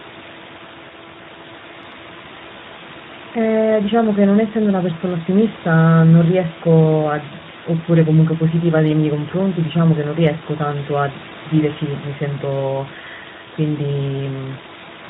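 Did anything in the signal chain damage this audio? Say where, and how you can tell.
Yes, at the codec stage: Speex codec damage runs throughout, a hoarse, buzzy roughness on the speech that fits a low Speex bitrate near 11 kbps, unlike the room noise about 14 dB below.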